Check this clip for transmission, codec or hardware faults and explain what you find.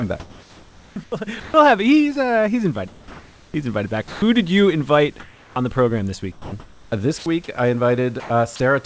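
The speech shows repeated voice-detector faults on the call path. Its G.722 coding has nothing above 8 kHz. That ceiling is a flat cut across the spectrogram and not a fault in itself.

Sound chopped by the voice detector occurs at 0.20–1.54 s, 6.32–7.26 s and 8.20–8.60 s. The sender's detector likely flicked between sending and muting, swapping quiet parts for synthetic fill. The sound turns choppy. The waveform shows ragged gaps, and the spectrogram shows smooth noise patches between detailed speech.

Comfort noise in place of the background appears at 2.88–3.54 s and 5.20–5.56 s. Transmission likely paused, and the receiver generated shaped noise instead. The background becomes featureless and about 5 dB and about 4 dB quieter. On the spectrogram the texture goes uniform, and the waveform envelope drops slightly.

Sound dropped by the voice detector happens at 4.08–4.22 s. The detector likely mistook quiet speech for background, and roughly 130 ms of sound disappears under steady noise. 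The waveform falls abruptly to a low, even floor. The spectrogram loses harmonic structure until sending resumes.

Onset clipped by the voice detector occurs at 5.54 s. The detector was likely late to notice speech resuming, so the first 20 ms was never sent. The sound starts abruptly. The waveform jumps straight from flat noise into speech, with no gradual rise.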